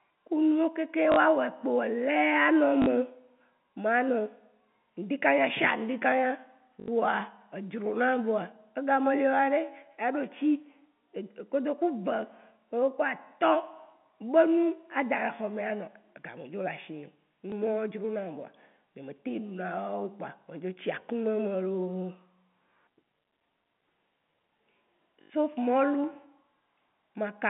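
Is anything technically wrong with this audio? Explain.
Yes, there's packet loss with the last packet repeated, at 1.12–1.16, 2.82–2.86, 6.8–6.88, 17.5–17.52 (between "me dzo lé ashinyè" and "dronam voa nyé me") and 25.22–25.3 s. Gaps of 20 to 80 ms, which fits 20 ms packets, get filled by replaying the last chunk. The longer ones buzz robotically at about 50 Hz, heard through the narrow G.711 phone band.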